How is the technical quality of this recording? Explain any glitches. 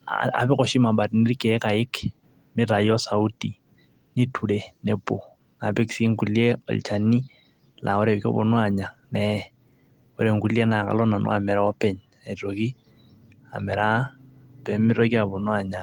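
No glitches can be heard anywhere in the recording, and the signal stays technically sound throughout.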